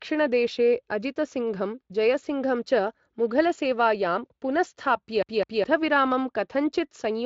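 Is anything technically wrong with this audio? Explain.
Yes. From 5.23 to 5.64 s the speech hits a CD stuck on one turn: a scratch bounces the laser back, so a 0.21 s chunk repeats twice with tiny mutes, giving that quick, even stutter. The speech comes through a Speex link with light codec roughness and nothing above 7.6 kHz.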